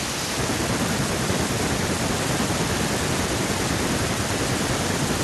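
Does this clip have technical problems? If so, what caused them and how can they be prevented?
Yes. Feedback echo between two devices runs from 2.18 to 4.99 s, with each stretch of speech returning at a repeat interval of roughly 150 ms, thinner and more ringing, peaking at about 16 dB below the speech. A second device in the same room is on the call and plays this microphone's signal aloud. The microphone picks it up again, and its echo canceller cannot remove sound another device plays. To prevent it, mute or leave the call on all but one device in the room.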